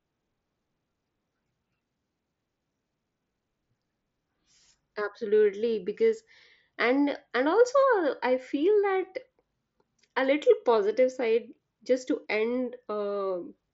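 Nothing stood out on listening to this speech recording, which comes through the wideband Bluetooth headset path as expected.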